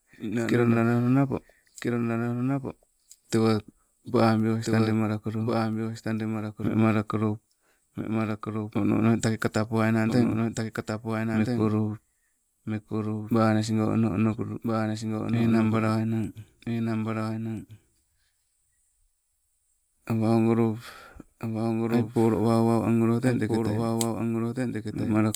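It's a speech recording with a doubled audio track running the whole way through: a second, full-band copy trails about one and a half seconds behind, roughly 5 dB down, with no room colour or decay on it. That's most likely a slower second capture path mixed back in.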